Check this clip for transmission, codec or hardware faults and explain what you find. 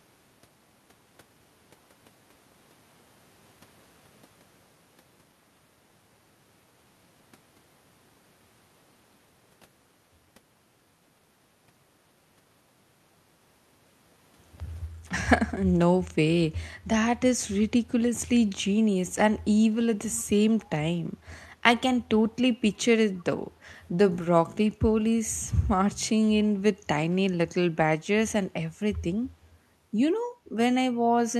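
Two faults show up in this speech clip: a brief echo-canceller gating dip and two short echo leaks.

From 14.92 to 15.1 s the background is gated by the echo canceller, which pulls the microphone down by about 10 dB for roughly 0.2 s. The room tone audibly ducks, leaving a short pale band across the spectrogram.

At 20.13–20.24 s and 23.18–23.22 s a delayed copy of the speech returns 275 ms late, around 20 dB and then about 35 dB below the voice. This is likely an echo leak from a far-end canceller missing loudspeaker pickup, visible as faint repeated harmonics.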